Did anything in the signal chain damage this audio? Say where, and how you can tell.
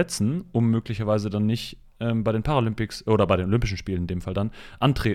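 No, nothing in the signal chain damaged this audio.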